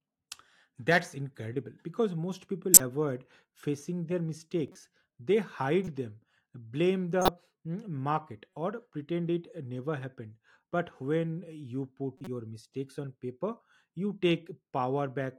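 Corrupt frame decoded at 2.74–2.80, 4.68–4.76, 5.84–5.88, 7.22–7.29, 8.54 and 12.18–12.28 s: damaged compressed frames were played anyway, misplacing spectral energy as brief chirps or noise bursts. The bursts at 2.74 and 7.22 s are the strongest. The one at 8.54 s is very faint.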